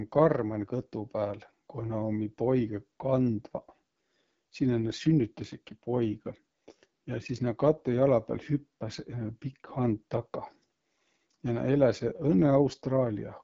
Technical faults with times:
0.00-13.43 AMR wideband (HD Voice) codec

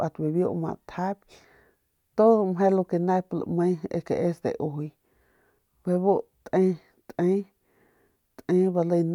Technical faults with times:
none

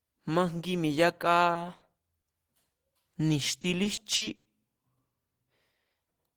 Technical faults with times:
1.53-1.83 short concealed packet loss
2.21-2.35 short concealed packet loss
3.61-4.47 repeated packet loss (robotic sound)

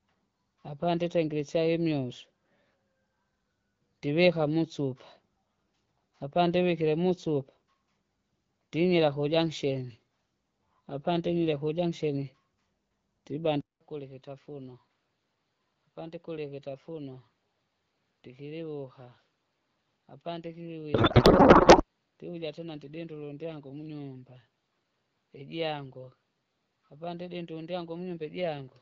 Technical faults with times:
13.61-28.82 input switched to a poorer device
20.93-21.84 codec payload misread

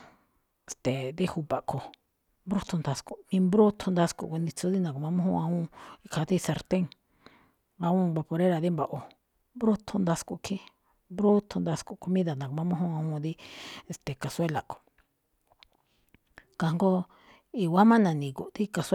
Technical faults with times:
13.26-14.76 crude rate conversion

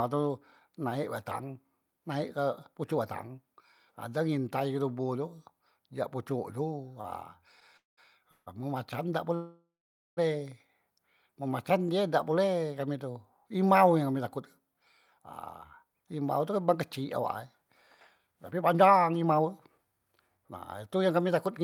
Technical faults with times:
7.01-7.06 short stall from a late packet
7.77-7.99 call audio freeze
8.31-8.62 call audio freeze
9.35-10.19 call audio freeze
14.37-21.59 jitter buffer speed-up

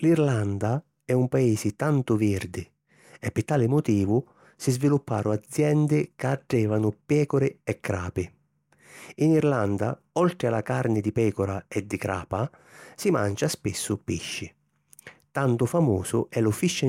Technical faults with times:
none

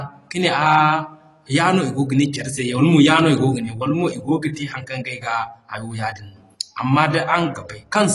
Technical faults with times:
0.00-8.14 AAC compression

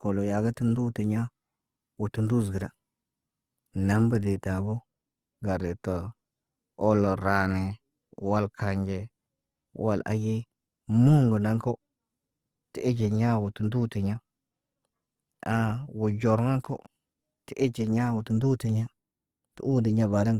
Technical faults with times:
0.00-20.39 Opus compression

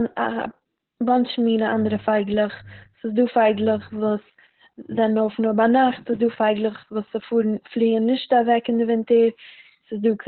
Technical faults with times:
0.00-10.27 Opus voice compression

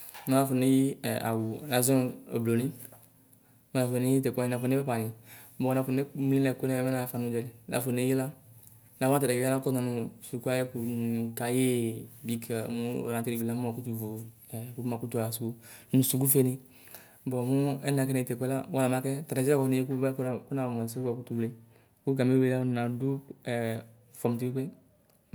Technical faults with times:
20.28-25.35 de-emphasis applied wrongly

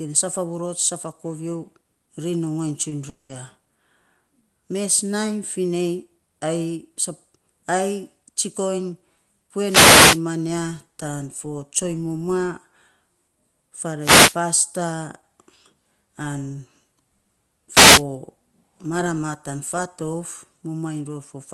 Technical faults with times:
2.89-2.93 short concealed packet loss
3.09-3.31 long network dropout
9.65-10.22 wireless microphone noise hit
13.99-14.38 wireless microphone noise hit
17.71-18.03 wireless microphone noise hit

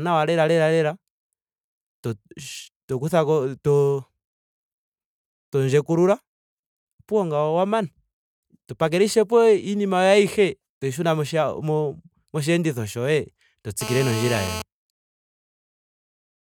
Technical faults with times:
13.81-14.62 GSM phone buzz

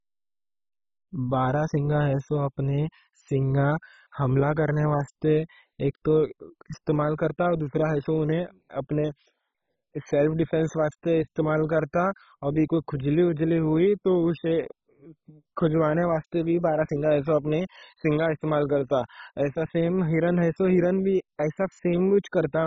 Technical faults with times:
0.00-22.67 MP2 compression

